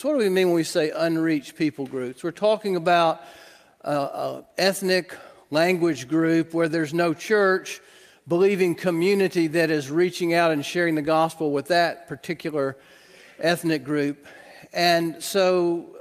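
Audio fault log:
No technical faults can be heard anywhere in the audio; the signal stays steady and continuous, with nothing that departs from how it should sound.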